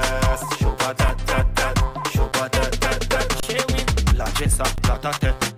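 The output buffer ran empty four times and the converter held its last sample, an underrun with held sample, freezing the sound flat briefly at 1.08 s, 2.32 s, 3.40–3.43 s and 4.76–4.78 s. Each dropout loses a few to about thirty milliseconds of audio.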